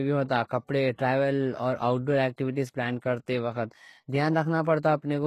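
From start to finish the speech carries plainly audible HE-AAC compression damage, likely from a low bitrate around 16 kbps. Treble above the crossover is rebuilt from copied lower bands rather than coded, so sibilants sound gritty and metallic, and nothing remains above 12.3 kHz.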